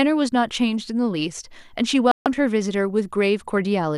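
At 2.11 s a digital broadcast dropout mutes the speech for about 0.15 s until 2.26 s. The receiver lost frames and went silent, leaving a flat waveform gap and a blank vertical band on the spectrogram.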